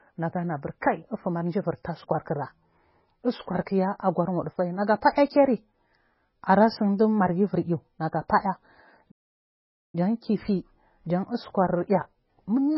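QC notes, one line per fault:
throughout, MP3 compression: The speech sounds watery and swirly, with a dull, boxed-in tone and metallic chirping on s sounds, and consonant attacks smear rather than snap. The likely cause is heavy MP3 coding at a very low bitrate, in keeping with something near 16 kbps, which starves the encoder so weak frequency lines drop in and out from frame to frame.
9.11 to 9.95 s, playback stall: The speech halts mid-flow and the output falls silent for about 0.83 s before carrying on, so the gap lands inside the sound rather than at a natural pause. The likely cause is the player running dry of data, or its thread being held up, so nothing reached the output until it caught up and resumed.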